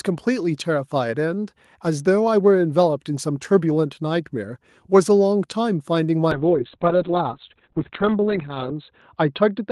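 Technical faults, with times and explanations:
6.37–9.72 s, call bitrate drop: From 6.37 s the speech turns muffled and rough, with a watery, smeared texture that stays to the end of the clip and never recovers. The call's bandwidth estimate fell and the encoder was pushed onto far fewer bits, which fits a fall from about 32 kbps to roughly 6 kbps, held at its lowest for about 2.4 s. Coding grows coarse, and the audio band shrinks from 20 kHz to 4 kHz, removing the upper frequencies.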